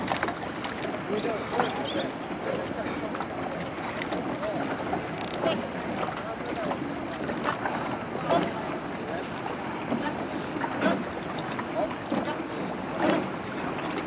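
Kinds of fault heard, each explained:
No kinds of fault are heard, though the audio has gone through a G.711 A-law call path that leaves nothing above 4 kHz.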